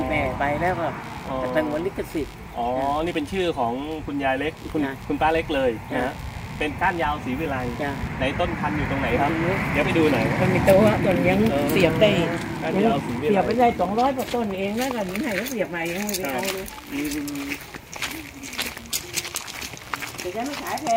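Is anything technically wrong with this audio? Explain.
Yes. Computer activity noise runs throughout: processor or peripheral load shifting the shared audio ground adds a faint buzzy pulsing near 70 Hz, roughly 30 dB below the sound.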